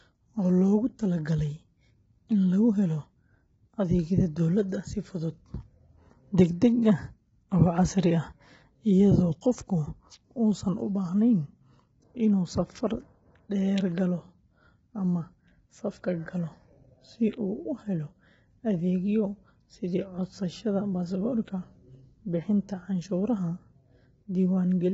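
From start to end the speech sounds rough and grainy, with nothing above 7.8 kHz. This is likely low-delay AAC compression, its short frames starved at a rate fitting 16 kbps.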